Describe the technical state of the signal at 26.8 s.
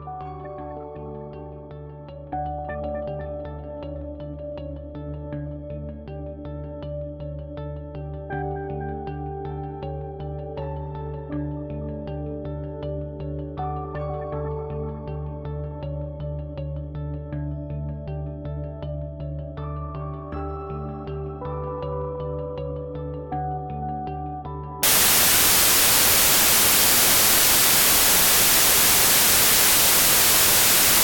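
At 26.8 s the signal has a wrong sample width fault, running from 24.83 to 31.04 s. Audio stored as 32-bit integers is read as packed 24-bit values, so bytes are misaligned. Loud noise buries the sound, which plays at 0.75 speed and lower pitch.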